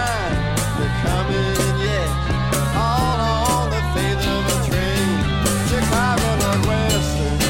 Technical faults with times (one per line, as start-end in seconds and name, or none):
1.86-3.13 drift correction step